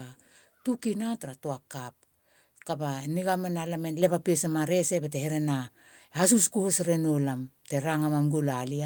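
In this speech clip, at 4.02 s, just after "niga mena lam e", the whole recording jumps up by about 4 dB at once, voice and background together. This is the microphone volume stepped up: the call software judged the input too quiet and raised the device's level in a single step.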